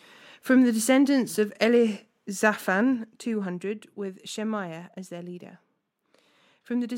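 From 2.61 to 3.84 s, zipper noise: the level drops roughly 10 dB in unsmoothed 1 dB steps, about seven per second, each leaving a faint tick. The waveform envelope descends as a staircase, and the spectrogram shows thin vertical broadband lines at each step.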